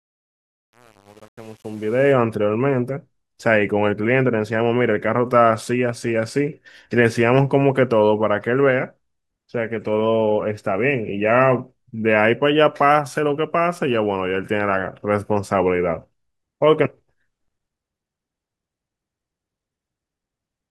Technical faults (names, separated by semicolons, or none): truncation distortion on a fade